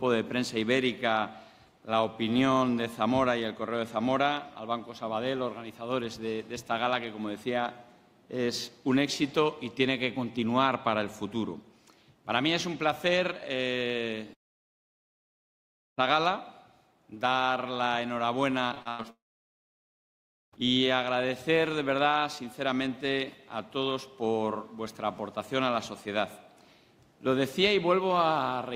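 A likely long network dropout from 14.33 to 15.99 s cuts the stream. The sound briefly smears into a fading buzz, then about 1.6 s of silence follows before audio resumes with that stretch gone. Repeated packet loss from 18.67 to 19.06 s leaves a rapid run of short holes, the longest about 0.1 s, with roughly half the span patched over, so the sound turns choppy and robotic. Straight after, a second likely long network dropout from 19.10 to 20.54 s drops into about 1.4 s of silence before audio returns with that section missing.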